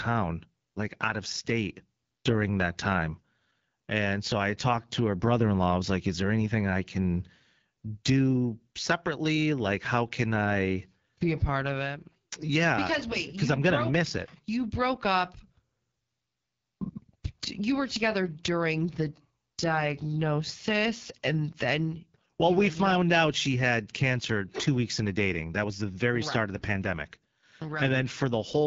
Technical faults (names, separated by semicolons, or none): AMR wideband (HD Voice) codec